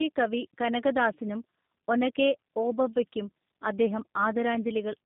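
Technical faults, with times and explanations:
Throughout, tandem speech coding: the speech passed through two low-rate speech codecs in a row, with the sound pointing to AMR-NB followed by G.729A. The second coder re-encodes the first one's errors, so the voice sounds rough, muffled and warbly, with nothing above 3.8 kHz.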